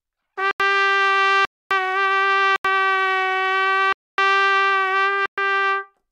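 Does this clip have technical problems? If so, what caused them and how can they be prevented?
Yes. The output buffer was not filled in time, so blocks of samples were replaced by zeros. This produces a block of digital silence at 0.51–0.60 s, 1.45–1.71 s, 2.56–2.65 s, 3.93–4.18 s and 5.26–5.38 s. The two 85 ms gaps fit a 4096-sample buffer, and the others last 256 ms and 118 ms. Each drops abruptly to silence and back, leaving a short hole. Larger buffers or a higher-priority audio thread would prevent these dropouts.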